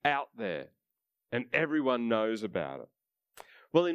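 No faults are audible anywhere in the speech recording.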